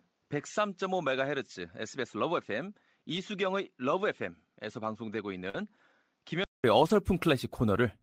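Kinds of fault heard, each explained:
Input switched to a poorer device: Until 6.64 s the sound is duller and about 5 dB quieter, likely from a lower-grade input device. A spectrogram shows nothing above 7.6 kHz, a noise floor about 50 dB down, and a 200 ms flat gap in the waveform at the changeover.
Lost packet rebuilt from error correction: At 0.37, 3.15, 5.54 and 6.82 s, lost packets were replaced by low-bitrate copies carried in the following packet. These run for 40 ms, or 60 ms at 6.82 s. They sound rough and grainy, and show as brief smeared, noisier patches on the spectrogram.
Short concealed packet loss: At 5.49 s, roughly 40 ms of audio never arrived. The decoder filled about 43 ms by extending the preceding sound and then blending back. It is heard as a brief smear, and the spectrogram shows a short stretch of repeated, blurred texture with smoothed waveform detail.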